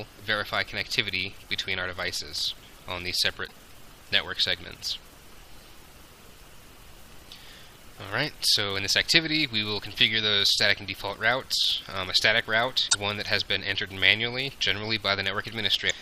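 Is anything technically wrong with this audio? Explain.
Yes. Two short glitches break in, at 3.44 to 3.52 s and 12.87 to 12.95 s, each about 80 ms long. This is damaged data in a compressed stream: corrupted bytes are misread by the decoder, which loses frame sync and must hunt for the next valid frame header.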